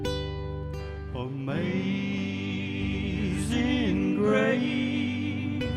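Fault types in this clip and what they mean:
Nothing stood out on listening; no technical problem could be heard anywhere in the audio.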